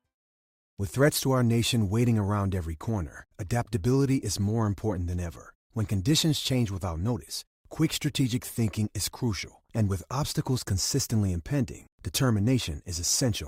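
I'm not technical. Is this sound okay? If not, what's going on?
Yes, no faults here.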